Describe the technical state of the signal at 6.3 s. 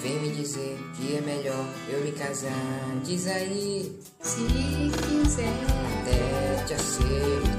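At 6.3 s the signal is intact, with no dropout, distortion, glitch or other audible fault at that moment.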